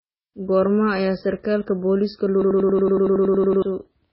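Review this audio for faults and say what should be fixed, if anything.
The whole speech clip sounds dull and watery. Nothing survives above 5.6 kHz. Weak detail swirls in and out between frames. This is likely heavy MP3 compression, and the damage points to a bitrate near 16 kbps. To prevent it, keep a lossless master or encode at a far higher bitrate.

Right after "ayaa sarkaalka booliiska", a system hang loop runs from 2.42 to 3.62 s. One 93 ms slice repeats 13 times, a machine-gun stutter at 10.8 Hz. That fits a 4096-sample buffer cycling while the system froze. About a second of real audio is lost. To prevent it, fix the driver or system stall and re-record that passage.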